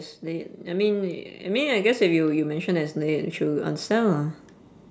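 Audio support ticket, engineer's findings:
Automatic gain rising from 0.21 s to 4.38 s: voice and background swell together by about 9 dB, the AGC slowly lifting gain on an input it judged too quiet. Call mic processing path is in use, nothing above 8 kHz.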